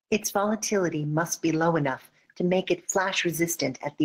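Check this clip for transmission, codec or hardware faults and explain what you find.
Gain pumping runs throughout: the gain ducks by around 5 dB under loud speech, likely from input gain set too high into a fast limiter.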